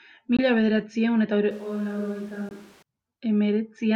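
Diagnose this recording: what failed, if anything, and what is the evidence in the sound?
Two short holes punch through the speech, at 0.37 to 0.39 s, right before "bederatziehun eta", and again at 2.49 to 2.51 s. Each gap is about 19 ms, and the speech picks up as if it kept running. That's likely a Bluetooth dropout: one packet on the wireless playback link arrived late and got discarded.

From 1.51 s, just after "bederatziehun eta", until 2.82 s, the speech suddenly goes roomy and hollow, thinner in the bass, roughly 10 dB quieter, with room noise only about 25 dB under it. It flips back just as abruptly. That's likely a switch to a distant microphone at the capture stage, with the close mic's signal dropping out.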